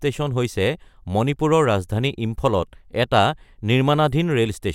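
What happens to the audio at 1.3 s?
Nothing goes wrong at 1.3 s; the speech passes through that moment intact, with no dropout, click or distortion.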